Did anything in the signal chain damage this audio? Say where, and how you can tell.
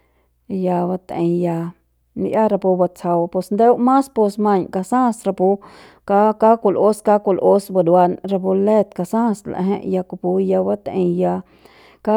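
No, nothing in the signal chain damaged this audio.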